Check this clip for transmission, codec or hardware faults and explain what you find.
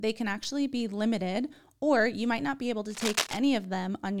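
Two faults stand out in this speech clip: one reordering glitch and one burst of scratchy noise.

At 0.43 to 0.45 s, just before "be limited or you", chunks play out of order. A 10 ms chunk arrived one slot late, giving a jumbled moment rather than the silent gap of a dropout.

From 2.90 to 3.38 s, just after "might not be able", cable scratch noise appears: uneven rustling only slightly below the speech, likely from a worn contact shifting, rougher and more irregular than steady hiss.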